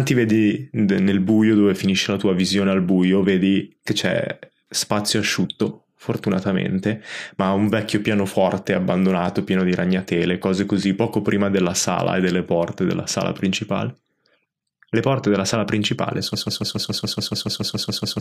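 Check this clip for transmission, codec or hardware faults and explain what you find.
One fault is present. A broken-record loop begins at 16.35 s, right after "porte della sala principale", and lasts to the end. The stream likely stalled and kept resending its last held fragment, so a 142 ms slice repeats exactly, thirteen times back to back, replacing the speech that should have followed.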